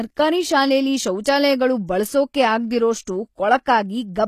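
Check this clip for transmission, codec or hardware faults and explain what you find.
Two codec faults are audible: treble damage throughout the speech, and one smeared attack.

Throughout, sibilants sound gritty and metallic, with nothing above 15 kHz. This is likely HE-AAC compression near 24 kbps: rebuilt treble with misaligned harmonics, unlike a plain low-pass's dullness.

At 3.05 to 3.07 s, pre-echo: a 20 ms hiss precedes an attack, as block-spread quantisation noise fills the gap, softening the onset rather than clicking.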